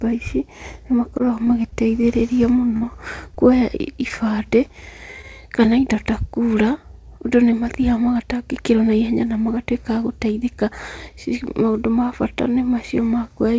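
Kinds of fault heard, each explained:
Repeated packet loss (robotic sound): From 1.18 to 2.05 s, just after "ici nĩ", packets kept going missing. Each short gap, none over 20 ms, was filled by extending the preceding sound. About a tenth of that stretch is patched, so the speech turns choppy.
Short concealed packet loss: At 2.77 to 2.83 s and 3.35 to 3.38 s, a few hundredths of a second failed to reach the decoder in time. The receiver carried the last sound across each hole and blended back, heard as a brief smear or wobble.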